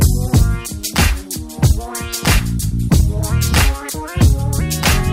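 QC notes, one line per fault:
No technical faults can be heard anywhere in the audio.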